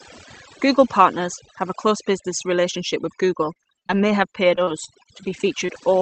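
From the first moment to the end, the speech carries overdone noise removal. A noise reducer pushed too hard is cutting individual frequency bands down or out whenever they sit close to its noise estimate, so faint parts of the speech vanish along with the hiss. Between phrases the background drops to near silence dotted with twinkling specks. Unlike a codec's band limit, the loss shifts moment to moment rather than sitting at one fixed cut-off. That fixed limit is heard separately here, with the call path topping out near 8 kHz.

From 3.41 s to 5.84 s, repeated packet loss (robotic sound) sets in. Around a dozen short holes open one after another, the longest about 33 ms, together taking away roughly 240 ms of the stretch. Each hole is papered over by extending the last sound heard, and the repair work spreads across around half a second in total. That gives a choppy, robotic texture with fragments missing. 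A single dropout would cause one brief stumble. Here the closely spaced holes make the breakup persist through the whole stretch.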